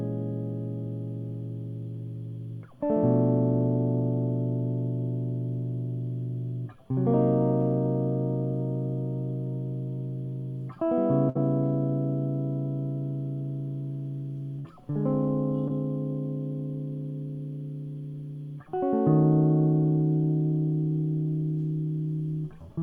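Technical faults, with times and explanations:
11.29–11.37 s and 14.59–14.68 s, burst of packet loss: in both places the music hangs briefly on its last sound, which fades for about 56 ms before playback jumps ahead. About 60 ms of material is skipped each time. At 14.59 s the join also runs about 12 ms long, so that resumption lands slightly late. Several consecutive packets failed to arrive, so the receiver extended and faded the final sound, then resumed further along.
15.68–15.71 s, short concealed packet loss: a brief smear passes through the music, like a tiny wobble lasting about 14 ms. About 20 ms of real audio is missing. A small gap reached the decoder too late, so the receiver continued the preceding sound and blended back into the incoming signal, leaving a short artificial patch.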